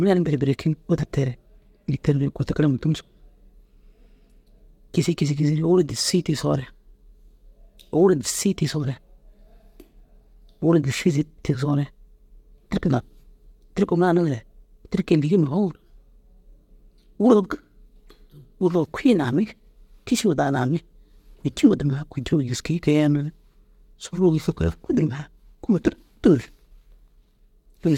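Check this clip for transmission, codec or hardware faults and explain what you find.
The check finds no faults to explain in this clip.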